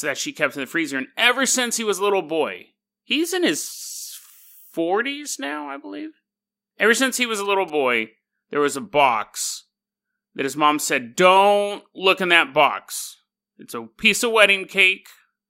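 From 6.98 to 7.70 s a galloping dit-dit-dit of short buzzes at about 217 Hz sits roughly 25 dB below the speech. These are GSM signalling bursts: a nearby 2G phone's radio pulses, rectified by the audio circuitry into audible interference.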